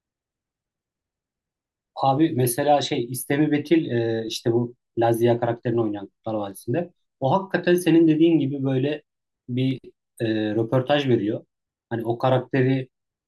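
At 6.51 s and again at 9.71 s the speech has a single sharp click, a thin vertical line in the spectrum. It's likely dropped samples, a tiny fraction of a millisecond missing, so the waveform jumps abruptly between values without losing any audible sound.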